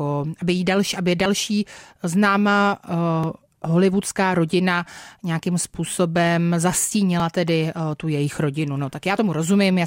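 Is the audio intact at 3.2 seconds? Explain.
No. At 3.24 s there is an overlap between stream segments: two segment time stamps overlap, and the player trims that stretch from speech that was never duplicated. A few milliseconds vanish, the waveform jumps, and a brief click or skip is heard.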